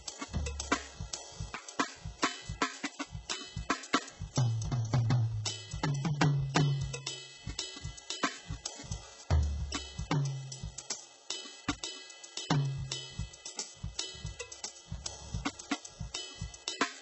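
A music clip carrying heavy HE-AAC compression damage throughout, likely from a very low bitrate near 8 kbps. The treble sounds gritty and metallic, with harmonics misaligned across the crossover. A spectrogram shows smeared, copied-looking upper bands and nothing above 8 kHz.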